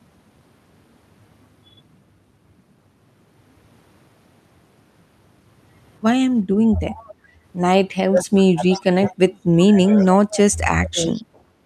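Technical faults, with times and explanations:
6.74–7.13, 8.69–9.15, 9.85–10.39 and 11.09–11.39 s, echo leak: a faint copy of the far talker's voice trails about 372 ms behind, roughly 15 to 30 dB down, likely loudspeaker pickup slipping past the echo canceller.
7.16–7.41 s, background gated by the echo canceller: the room sound dips by about 9 dB for a fifth of a second, as the canceller clamps the mic, then recovers.
8.06–9.34, 9.67–10.11 and 10.75–11.18 s, speech suppressed in double talk: the near voice ducks, by as much as 30 dB at worst, likely the canceller muting both sides while they overlap.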